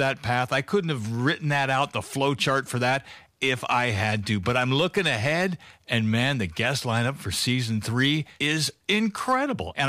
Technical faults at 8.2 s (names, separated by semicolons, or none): hard clipping